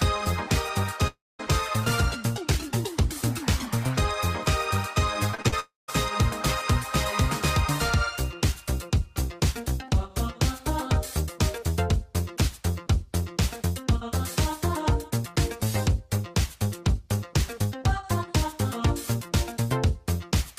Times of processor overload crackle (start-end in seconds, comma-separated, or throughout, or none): none